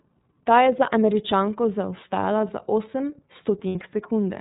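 From start to end the speech carries iLBC codec damage: nothing above 4 kHz survives, and voiced sounds turn rough and faintly synthetic, as the codec rebuilds each frame's excitation on its own. The roughness, not just the missing top end, separates it from plain low-pass filtering. It fits 13.33 kbps iLBC with 30 ms frames.

At 3.69 s, right after "zaostala za osem", lost iLBC frames leave a 60 ms gap. The decoder fills it by repeating the last pitch cycle blended with noise, so it sounds like a brief held, buzzy vowel rather than a silent dropout. The voice returns to normal at once, which fits two lost 30 ms frames in a codec with no carried-over state.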